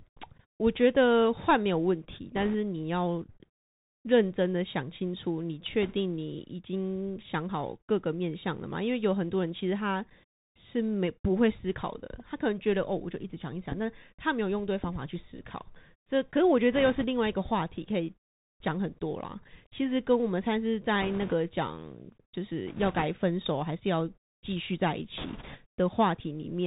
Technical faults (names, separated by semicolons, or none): Bluetooth CVSD headset codec; bit errors on a Bluetooth voice link